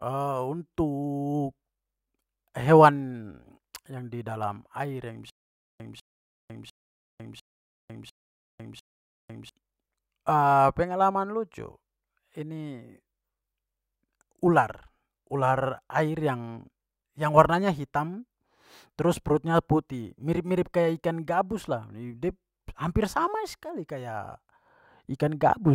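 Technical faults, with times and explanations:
5.30 to 9.49 s, stutter with silent gaps: a stream that likely stalled replays one 198 ms fragment six times, each followed by 501 ms of silence, and the missing speech is lost.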